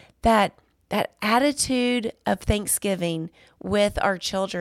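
No technical faults are audible.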